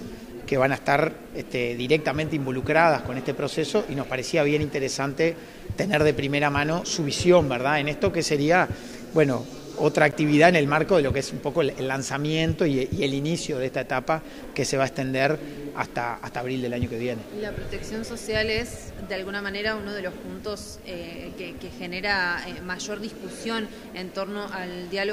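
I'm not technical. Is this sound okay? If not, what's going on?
No. At 10.11 s there's a block of digital silence: the sound drops out for about 15 ms, heard as a tick, a true gap rather than crackle.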